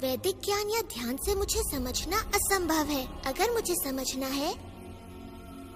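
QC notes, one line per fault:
No faults found on this pass; nothing to log.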